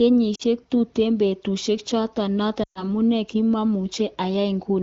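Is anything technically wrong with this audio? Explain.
Yes. Lost AMR speech frames occur at 0.35–0.43 s (about 40 ms) and 2.63–2.84 s (about 120 ms). The wideband decoder conceals each gap by reusing the last good pitch and vocal-tract parameters at falling gain. The first gap drops quickly to near silence. The second drops to near silence within two frames before speech returns weak or rough for a moment.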